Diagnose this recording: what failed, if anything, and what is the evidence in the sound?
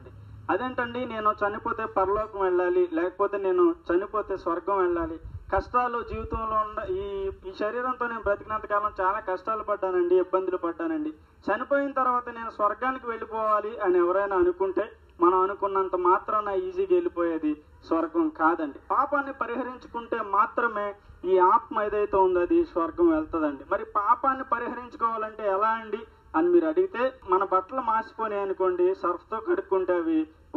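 Channel delay (comb filtering) runs through the whole recording: a constant hollow, phasey colour with a first notch near 700 Hz and further notches evenly spaced above it. That points to a mono sum of two channels offset by roughly 0.7 ms at the driver or buffer stage. Because the notches stay fixed, this is not a codec fault.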